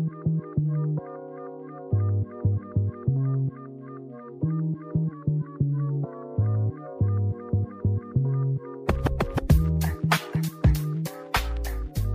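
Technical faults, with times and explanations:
5.12–6.42 s and 10.96–11.69 s, drift correction step: playback first slows by 6%, dropping pitch 107 cents, then speeds up by 6%, raising pitch 101 cents, about a semitone each way before snapping back. Likely clock-matching software stepping its rate to manage its buffer.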